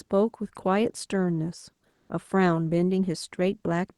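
From 1.89 to 2.09 s, the quiet background turns into a flat, featureless hiss about 4 dB lower than before. This is comfort noise in place of the background, likely from Opus discontinuous transmission: the sender paused, and the receiver filled those 200 ms with synthetic noise.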